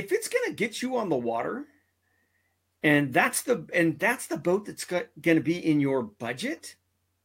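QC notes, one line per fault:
No faults were found in this speech clip. There is nothing to log against any time.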